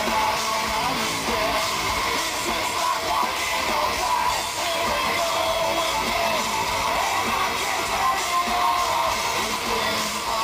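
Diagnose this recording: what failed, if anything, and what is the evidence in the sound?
Sample clock jitter at the converter, throughout. A hiss rides on the sound, roughly 20 dB below it. It swells on loud, bright passages, fitting timing errors of around 10 µs.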